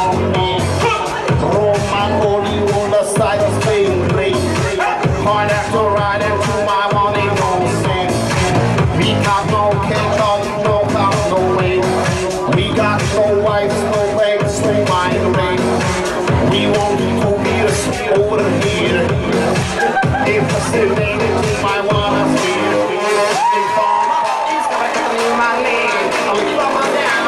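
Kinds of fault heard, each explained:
No technical faults can be heard anywhere in this clip.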